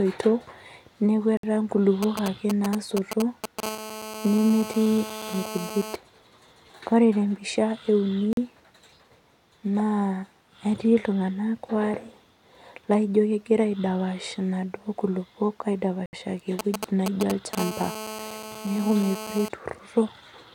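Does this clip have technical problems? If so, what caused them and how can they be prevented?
Yes, there are three kinds of problem in this speech clip.

The sound drops to dead silence three times: at 1.37 s for about 61 ms, at 8.33 s for 43 ms, and at 16.06 s for 72 ms. Each time it picks up again right after. That's most likely a Bluetooth stall: radio interference held up packets, the headphones' buffer emptied, and playback paused until the resent data arrived. To prevent it, keep the phone close with a clear line of sight and away from busy 2.4 GHz sources like Wi-Fi routers.

From 2.03 to 3.60 s, and again from 16.59 to 17.55 s, there's a galloping dit-dit-dit of short buzzes. Those are GSM signalling bursts. A nearby 2G phone is exchanging short groups of radio bursts with the network, the kind that come before a call or a text, and the audio circuitry is rectifying them into audible clicks at the 217 Hz frame rate. 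They're fairly loud, only a few dB under the speech. To prevent it, keep mobile phones well away from the recording chain or switch them to airplane mode.

Each signalling episode rolls straight into a steady GSM phone buzz, from 3.63 to 5.96 s and from 17.58 to 19.49 s. It's a hard, raspy 217 Hz tone full of harmonics, sitting about 11 dB below the speech. That's the same phone now in an active call, transmitting bursts 217 times a second, with the mic or preamp demodulating the RF pulses into the audio. To prevent it, keep phones a couple of metres away and use well-shielded balanced cables.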